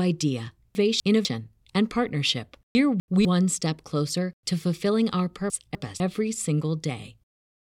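At 0.75–1.25 s (just before "and partnership"), 2.75–3.25 s (before "step closer to fulfilling") and 5.5–6.0 s (after "closer to fulfilling our"), chunks play out of order: a 250 ms chunk arrives one chunk late and plays after its successor. Each swap sounds like a jumbled stumble. On a waveform or spectrogram it shows as abrupt vertical discontinuities at 250 ms spacing, with formant and harmonic tracks jumping instead of flowing smoothly.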